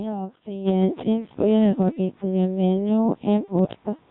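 Codec 2 vocoder, throughout: the speech is rebuilt from pitch, voicing, energy and a spectral envelope rather than the original waveform, so it sounds heavily robotic and buzzy, which fits a rate around 1.3 kbit/s. Sudden gain jump at 0.68 s: the speech and background step up together by about 14 dB and stay louder to the end, likely from a digital gain change applied without a ramp. Bit errors on digital voice radio from 1.89 to 1.99 s: a few flipped bits corrupt the frame parameters, and the voice briefly warbles and jumps in pitch and tone, which points to a couple of damaged frames. Bit errors on digital voice radio again from 3.53 to 3.73 s: a longer burst of garbled pitch, level and timbre turns the speech into robotic bleeps, consistent with roughly three frames hit.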